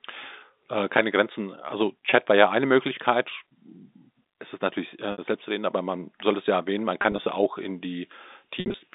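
Packet loss with pitch repetition interrupts this telephone-band speech at 2.10–2.12 s, 5.12–5.18 s, 7.02–7.26 s and 8.60–8.74 s. At each gap the receiver fills missing audio by looping the last pitch period, so short gaps briefly hold as a buzzy sustained tone, while longer runs fade into silence before the speech cross-fades back. The first is a 20 ms dropout, fitting one packet. The second is 60 ms. The third scatters about 80 ms of loss across 240 ms, and the last 100 ms across 140 ms, including a 60 ms run. The G.711 line band itself is heard with at most faint quantisation noise.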